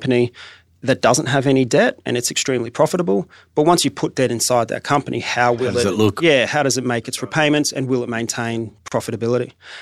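A gap at a join of encoded pieces at 8.88 s opens a 35 ms hole in the speech: separately encoded segments were spliced untrimmed, leaving padding silence.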